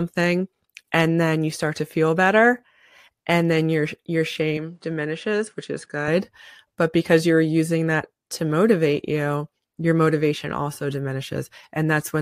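Right after "and then your your", at 4.57 s, the sound abruptly turns duller and about 5 dB quieter, with no gap at the change, and a faint new background noise appears far below the speech. Nothing above 10.5 kHz gets through until the fuller sound returns at 6.08 s. This is likely an input switched to a poorer device: the recording briefly drew on a narrower-band microphone with its own tone, level and noise floor before switching back.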